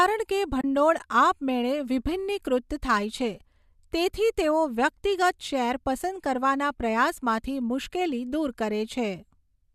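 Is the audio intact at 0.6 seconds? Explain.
No. There is AAC frame loss with muting from 0.61 to 0.64 s. A gap of about 30 ms opens in the speech, which fits three lost frames of roughly 10 ms each, as the likely low-delay AAC stream would use. The decoder fills the missing frames with silence. Overlapping windows fade the sound out before the hole and back in after it. The result is a brief, soft-edged dropout.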